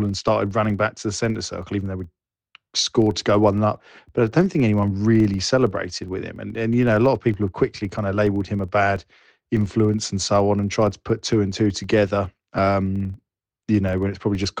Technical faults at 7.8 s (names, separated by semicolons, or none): filter restarted on every block